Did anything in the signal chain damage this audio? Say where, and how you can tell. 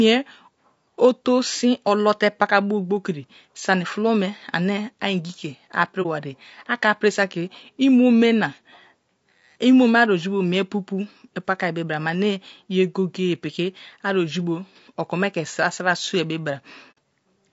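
Yes. Low-delay AAC compression, throughout: the speech sounds rough and grainy, with noise between harmonics and a lowered or synthetic top band. This is likely a codec stage running near 32 kbps.

AAC frame loss with muting, at 6.02 to 6.06 s and 16.91 to 16.97 s: a brief dip, then a soft-edged hole. These fit one and then two lost frames, whose zeroed spectrum faded out and back in.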